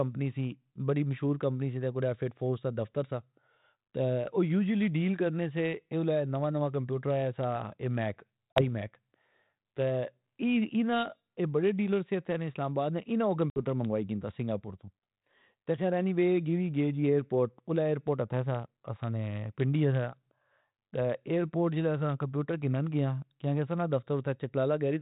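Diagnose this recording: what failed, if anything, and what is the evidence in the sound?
Two hard-edged silent holes cut into the speech, with the sound afterwards returning briefly rough before it settles. The first is at 8.53 s to 8.62 s, just after "اے میک", and the second at 13.5 s to 13.62 s, between "آباد نے انا او" and "منگائی کندا سنگا پور". This is packet loss on an ADPCM call, a network fault. About 40 ms and 60 ms of audio went missing, which fits roughly two and three lost packets. Because the G.726 ADPCM decoder, running at 32 kbit/s, tracks the sender's adaptive prediction and step size, each gap knocks those out of step until they realign over the following tens of milliseconds.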